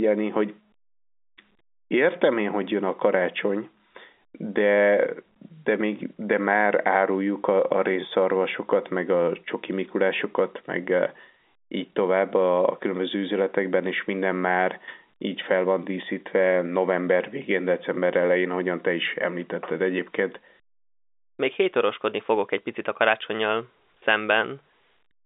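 No faults are audible in this speech, which carries the narrow band of a telephone line consistent with G.711 coding, with little below 300 Hz or above about 3.6 kHz.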